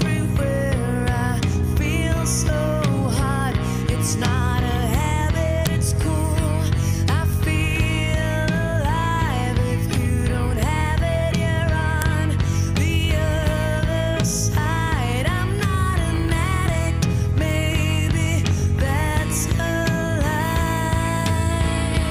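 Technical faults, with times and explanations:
5.67 s and 12.02 s: file header played as audio. Two sharp, loud snaps, each where a new piece of the file begins. The header bytes at each join got read as samples instead of being stripped, so you hear a click regardless of what the sound is doing there.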